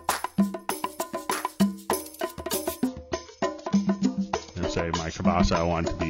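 From about 2.87 s to the end, the adaptive stream drops to a lower bitrate, roughly 96 down to 24 kbit/s, so treble vanishes above 7 kHz, without any gap.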